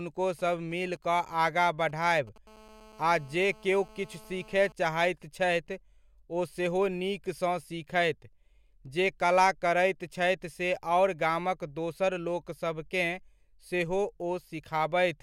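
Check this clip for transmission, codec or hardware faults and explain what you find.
Two bursts of mobile-phone interference sit on the speech in the first five seconds, one right after the other.

From 0.39 to 2.38 s there are GSM signalling bursts: a galloping dit-dit-dit of short 217 Hz buzzes, roughly 25 dB below the speech. A nearby 2G handset is exchanging control traffic with the network, transmitting in brief clusters at a 216.7 Hz frame rate. Something in the audio chain rectifies those radio pulses into a stuttering buzz.

From 2.47 to 4.72 s, ending just before "चाहैत छथि", the pattern turns into a continuous GSM phone buzz. It is a hard, harmonic-rich rasp at 216.7 Hz, about 26 dB below the speech, and it is unrelated to what is being said. At this point the handset is in a call and sends its bursts without a break, so the rectified envelope becomes a steady buzz instead of intermittent groups.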